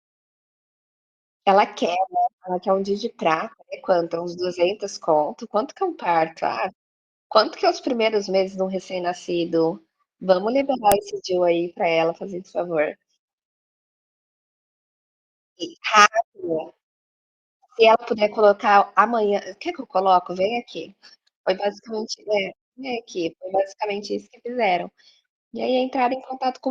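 At 10.92 s a sharp, loud click cuts into the speech. This is a file header played as audio. Two WAV pieces were joined without stripping the second one's header. Its few dozen bytes were read as samples and burst out as a snap.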